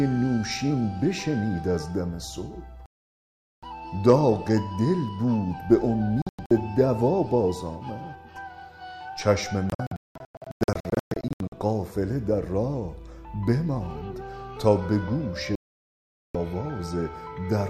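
The sound cuts or quickly fades to silence four times, each time resuming later in the programme with the missing stretch gone. There is a solid gap from 2.86 to 3.63 s, a few short holes scattered between 6.22 and 6.51 s, a broken run of gaps from 9.70 to 11.53 s, and another solid gap from 15.55 to 16.35 s. This is digital broadcast dropout: the receiver lost the signal or rejected corrupted frames and muted until clean ones arrived.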